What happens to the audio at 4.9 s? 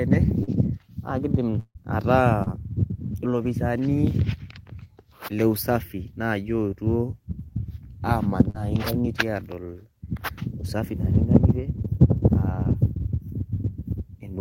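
Nothing goes wrong at 4.9 s; the speech carries on intact through that moment, with no dropout, click, distortion or other audible fault.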